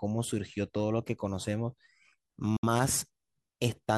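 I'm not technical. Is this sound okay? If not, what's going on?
No. Around 2.56 to 2.64 seconds there is most likely a Bluetooth dropout: a few chunks of audio didn't reach the headphones in time and were thrown away. You hear a sudden hole of silence in the speech lasting about 61 milliseconds, which fits roughly three lost packets. When the sound returns, it doesn't pick up where it stopped. It jumps ahead, as if it had kept playing during the gap, so that tiny piece is simply missing.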